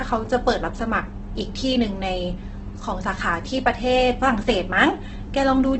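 From start to finish the speech is rough and grainy, with nothing above 8.2 kHz. This is likely Opus compression in its CELT music mode at a very low rate, roughly 12 kbps, filling starved bands with folded or noise-like content instead of leaving holes.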